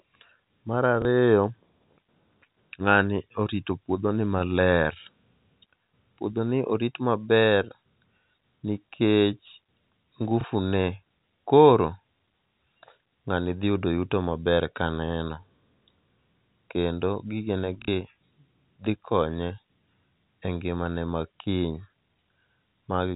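Speech over a telephone-band channel, with small blips at 1.02–1.05 s and 10.41–10.44 s and a brief robotic stutter at 17.82–17.88 s, packet loss with last packet repeated, each gap sounding like one or two lost 30 ms packets replayed.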